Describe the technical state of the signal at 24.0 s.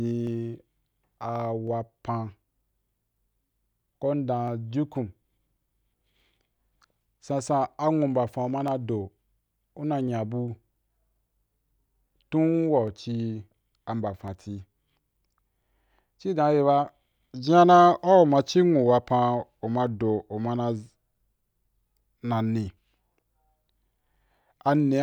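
At 24.0 s the speech sits at the tail of a run of clock drift buffer slips lasting from 0.27 s to 24.07 s: clicks recur every 1.4 s, about twenty in all. This regularity likely points to two devices on independent clocks drifting apart by roughly 300 ppm, so each slip drops or repeats only a handful of samples, on the order of fifteen. The strict 1.4 s spacing is what separates it from random crackle or longer dropouts.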